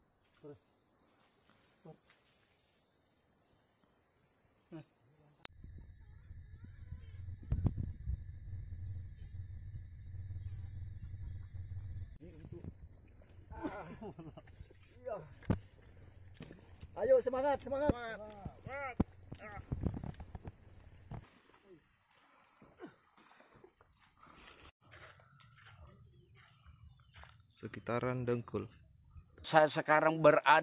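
Nothing is technically wrong with the audio.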